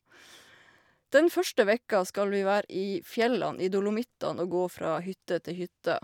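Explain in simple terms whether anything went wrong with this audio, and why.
Nothing went wrong here: the speech comes through steadily all the way, with no glitches, dropouts or odd noises anywhere along the way.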